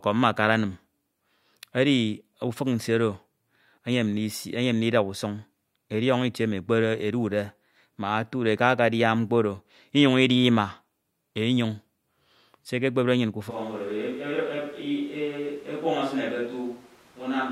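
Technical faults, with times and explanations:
13.52 s to the end at 17.51 s, switch to a distant microphone: the speech turns abruptly roomier and more hollow, drops by about 5 dB, and room noise rises to roughly 25 dB below it, likely because the close microphone cut out and a farther one took over.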